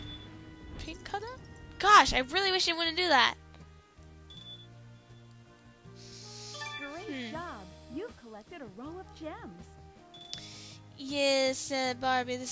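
The signal shows no technical faults at any point in the recording.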